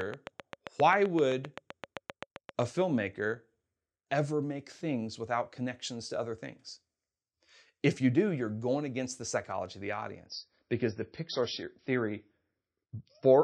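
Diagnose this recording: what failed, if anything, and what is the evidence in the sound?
Train of clicks, 0.01 to 2.63 s: about twenty regular clicks at 7.66 per second, about 15 dB above the speech, likely interference coupling into the analogue wiring.

Adaptive stream at a lower bitrate, from 10.26 s after "the psychology of the" to the end: nothing above 5.8 kHz, consistent with an MP3 stream switching from 128 kbit/s to 24 kbit/s.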